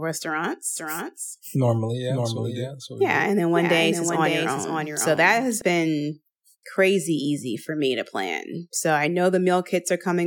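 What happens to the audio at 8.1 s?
Nothing goes wrong at 8.1 s; the speech runs on intact through that moment, with no dropout, click, distortion or other audible fault.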